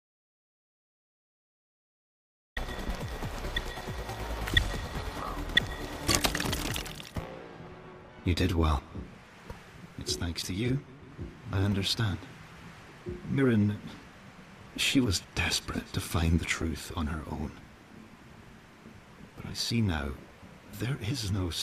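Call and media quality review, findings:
Audio dropout to silence, 0.00 to 2.57 s, already under way when the clip opens. Likely input loss (disconnected device, failed link or mute) with the encoder still writing silence. Dead silence with no room tone, unlike a gated or quiet lead-in.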